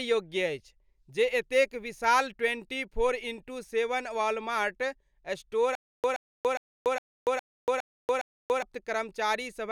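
From 5.75 s to 8.62 s the speech falls into a stutter with silent gaps. A short fragment of about 124 ms plays, then about 286 ms of dead digital silence, and the pair repeats seven times on a steady cycle of roughly 410 ms. It sounds like a stuck loop. The likely cause is a stalled player or stream replaying its last buffered chunk on each retry, so whatever should have played across those three seconds is simply lost.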